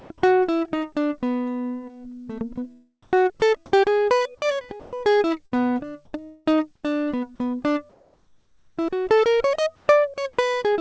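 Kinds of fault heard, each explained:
Sound chopped by the voice detector: At 0.0 to 0.22 s and 6.05 to 6.84 s the music cuts in and out. Parts are replaced by flat synthetic noise, likely from voice-detector switching.
Comfort noise in place of the background: Quiet stretches at 3.03, 7.90 to 8.78 and 9.76 s become steady featureless hiss. This is likely a synthetic fill replacing the real background.
Sound dropped by the voice detector: Around 4.80 to 4.92 s, about 70 ms of quiet music gives way to steady noise, likely because the detector treated it as background.
Burst of packet loss: At 5.46 to 5.53 s the last sound is held and fades briefly. The music then resumes with about 60 ms missing.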